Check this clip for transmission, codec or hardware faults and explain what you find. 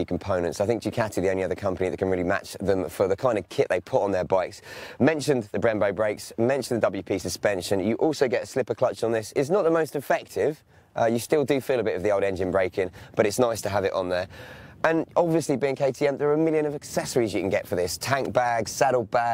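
No transmission, codec or hardware faults.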